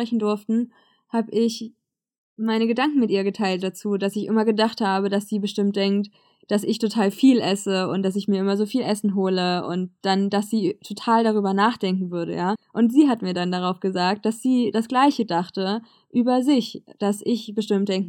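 A speech recording, with nothing technically wrong with it.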